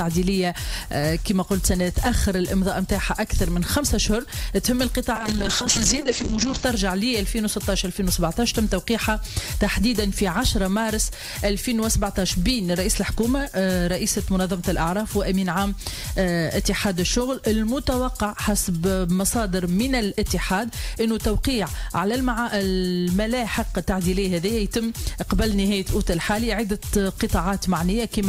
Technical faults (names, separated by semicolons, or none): call bitrate drop